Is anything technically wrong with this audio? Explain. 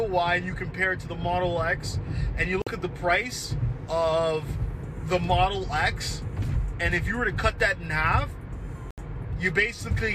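Yes. There are two digital broadcast dropouts. The first runs from 2.62 to 2.67 s and the second from 8.91 to 8.98 s. Each time, the receiver stopped getting valid frames and muted its output. The audio drops to silence for about 48 ms and then 72 ms, and resumes mid-programme. Those lengths fit two and then three lost frames of 24 ms each. Whatever was sent during each gap is gone.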